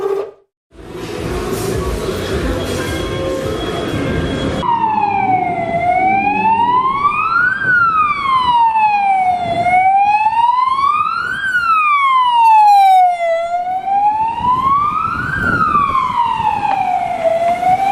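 At 8.71 s a short stall from a late packet occurs, lasting until about 8.77 s. A packet failed to arrive on time, so the jitter buffer emptied and the receiver padded the gap with about 29 ms of stretched sound before resuming exactly where it left off. Nothing is lost, but playback runs 29 ms later from that point. It sounds like a brief held moment with a faint buzz. A spectrogram shows horizontally smeared, frozen bands, and the waveform shows a repeating, slightly dipped stretch.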